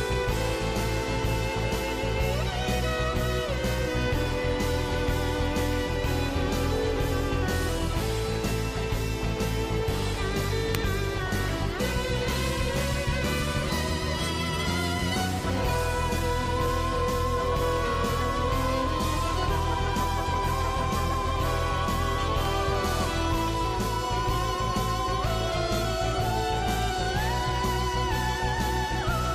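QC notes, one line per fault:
10.75 s and 22.45 s, electrical switching spike: two sharp snaps sit on top of the sound, the first louder at about -10 dBFS and the second near -15 dBFS. Each is likely a nearby switch arcing into the line. On the waveform each shows as a needle-thin spike, and on the spectrogram as a narrow vertical stripe spanning all frequencies.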